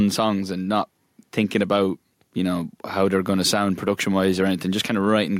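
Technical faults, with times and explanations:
Throughout, gain pumping: the level keeps rising and falling by around 5 dB, leaving loud and soft parts squeezed close together. The likely cause is input gain set far too high with a fast limiter or compressor clamping down on every peak. On a waveform the peaks look flattened to a near-even ceiling.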